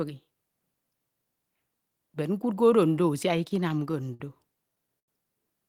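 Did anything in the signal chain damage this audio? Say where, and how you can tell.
Yes, the damage happened on the network side, at the receiver's jitter buffer. Between 3.37 and 4.21 s there are repeated stalls, a stutter: eight separate hitches where the sound hangs and then carries on. Together they add about 123 ms of held-over sound, roughly 15% of that stretch, with the longest hold at 59 ms. Nothing actually drops out. Packets were arriving late, so the buffer kept running dry, and the receiver kept extending the last sound until fresh data showed up.

Then from 4.99 to 5.09 s there's a single short stall from a late packet. A sound gets held for about 87 ms and then resumes exactly where it left off, so nothing is lost. The tell is that stretched sustain. The network delay jumped by 87 ms at that point, so the packet wasn't there when it was due, the buffer emptied, and the receiver padded the gap until it arrived.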